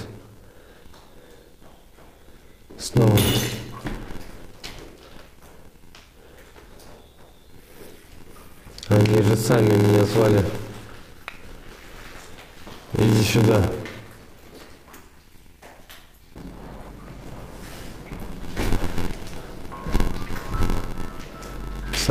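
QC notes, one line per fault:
Throughout: block size mismatch (padded), each block ends in a short silent gap, giving an 86.1 Hz buzz and 0.861× speed at unchanged timbre, which fits a 512-sample read.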